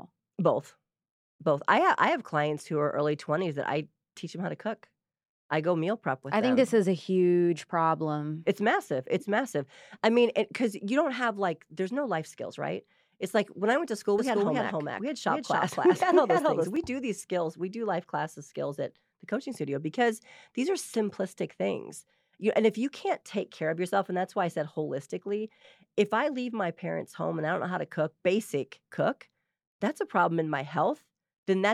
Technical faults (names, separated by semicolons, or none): doubled audio track